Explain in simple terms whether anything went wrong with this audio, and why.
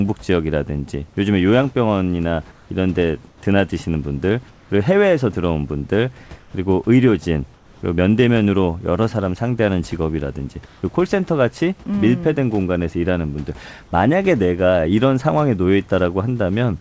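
Comfort noise in place of the background at 2.52, 3.28, 4.50, 6.40, 7.54 and 10.66 s. Each pause swaps the real room sound for flat, slightly quieter hiss, likely because the sender paused transmission during silence.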